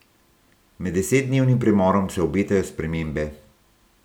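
No technical faults can be heard anywhere in this speech recording. Nothing breaks up, drops out or distorts at any point.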